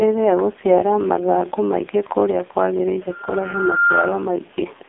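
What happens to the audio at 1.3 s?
At 1.3 s, as throughout the clip, the speech carries AMR narrowband mobile codec damage: nothing above 3.7 kHz, a thin 250 Hz to 3.6 kHz line band, and a buzzy, synthetic vocal-tract model that fits AMR-NB's 5.15 kbps mode, coding each 20 ms frame from very few pulses.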